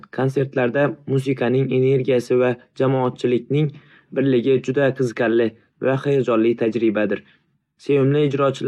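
No technical faults can be heard in the recording.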